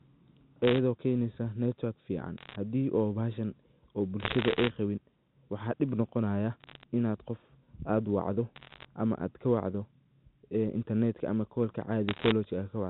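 Speech over a G.711 A-law telephone channel, band-limited below 4 kHz, carries bursts of bit errors on a digital phone line at 2.38–2.56 s, 4.20–4.70 s (just after "bahashan oo"), 6.60–6.83 s, 8.56–8.85 s and 12.09–12.32 s. Error rates of roughly one percent or less flip sign and high-order bits in individual samples, producing sharp ticks and crackle over unchanged speech. These show as isolated spikes on the waveform and thin full-band vertical lines on the spectrogram.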